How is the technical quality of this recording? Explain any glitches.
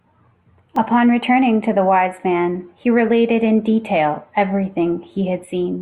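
A single glitch mars the recording. At 0.76 s, fresh audio arrived late, so the playback device repeated its last buffer once. This repeated buffer, about 1.45 ms long and consistent with a 64-sample buffer, produces a click or brief buzz with virtually no speech lost.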